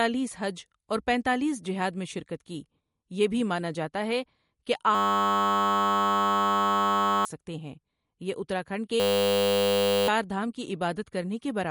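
Throughout the clip, the speech carries damage that most likely comes from MP3 compression at a low bitrate, in keeping with something around 48 kbps. Short of bits, the encoder removed everything above 11.2 kHz and dropped weaker frequency lines that flicker in and out from frame to frame. The result is a dull top end with a plainly audible watery, swirling texture, and consonant attacks sound smeared rather than crisp.

At 4.95 s, just after "مانا جاتا ہے کہ", a system hang loop begins. The computer or driver stalled while the audio hardware kept replaying one 10 ms slice of its buffer. Looping that short piece at 100 Hz turns it into a steady, pitched buzz that lasts until 7.25 s. About two seconds of speech is lost, and the talk resumes at "ہیں یہ اتراکھنڈ".

The same hang loop returns at 9.0 s, right after "ہیں یہ اتراکھنڈ". Once again a 10 ms buffer segment repeats at 100 Hz and gives the same flat buzz, this time until 10.08 s. 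Roughly a second of audio is lost.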